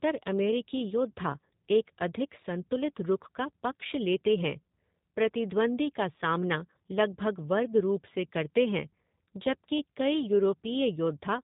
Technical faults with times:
0.00-11.43 G.729 codec

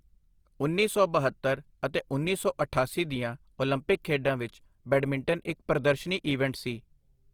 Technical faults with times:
0.00-7.33 Opus compression

